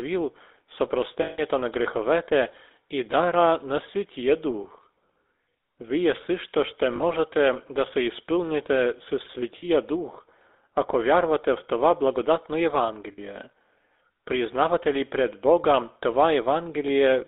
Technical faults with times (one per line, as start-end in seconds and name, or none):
0.00-17.27 GSM full-rate codec
1.22-1.40 lost GSM frames
6.96-7.04 lost GSM frames
9.58-9.66 lost GSM frames
13.12-13.20 lost GSM frames